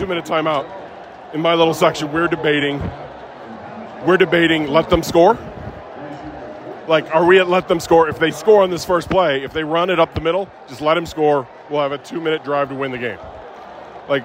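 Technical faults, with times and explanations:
No technical faults can be heard in this clip.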